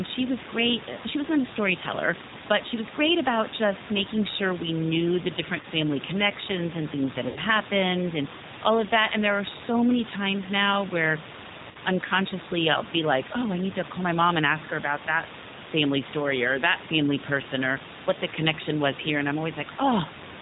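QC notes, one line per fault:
Throughout, G.729 codec: the speech sounds slightly rough and synthetic, with nothing above 4 kHz, because an 8 kbit/s coder rebuilds each frame from a few pulses.
5.61–5.66, 7.28–7.39 and 11.71–11.78 s, VoIP packet loss concealed by the speech codec: gaps of about 20, 80 and 40 ms become a buzzy tone or coloured noise that fades, and the voice stays weak briefly afterwards.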